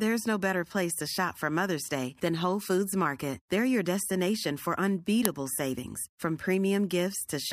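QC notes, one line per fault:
5.25 s, uninitialised buffer: right after "your destination for" and before "savings from" there's a tiny, loud crack of digital noise. A block got played before any audio landed in it, so stale memory came out as samples; the length fits a 64-sample block.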